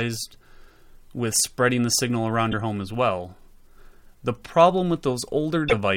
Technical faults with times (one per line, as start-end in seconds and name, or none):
2.51-2.54 broken MP3 bit reservoir
5.68-5.73 broken MP3 bit reservoir